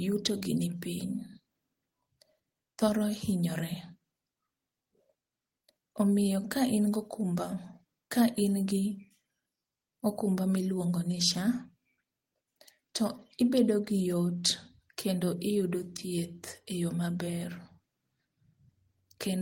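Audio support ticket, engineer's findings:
Engineer's findings: no audible faults in this speech clip; nothing to report on this ticket.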